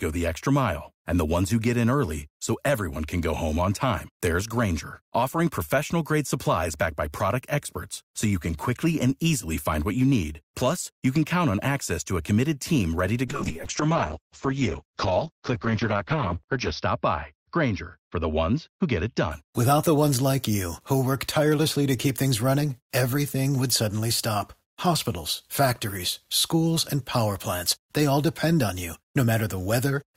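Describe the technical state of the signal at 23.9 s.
At 23.9 s the speech is intact, with no audible technical fault at that moment.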